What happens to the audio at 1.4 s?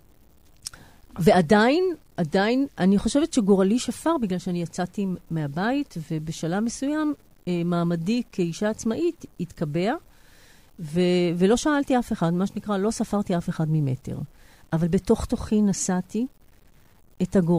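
At 1.4 s the speech carries grainy, signal-following distortion present throughout, likely low bit depth without dither: 9-bit truncation leaves error around 40 dB down that, unlike steady dither hiss, tracks the voice.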